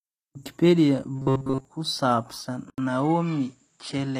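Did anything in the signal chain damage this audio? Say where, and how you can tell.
Yes. Throughout, the treble sounds synthetic and s sounds turn gritty, consistent with a low bitrate near 24 kbps. This is likely HE-AAC compression at the codec stage, rebuilding the highs by band replication.

From 1.16 to 1.65 s the audio becomes a rigid 133 Hz buzz. This is likely robotic sound from repeated short buffers in the driver, looping about 7.5 ms chunks for most of that stretch.

At 2.7 s an 80 ms silence is followed by a changed tone and a new, low background noise, with the level roughly unchanged. This is likely the input switched to a poorer device.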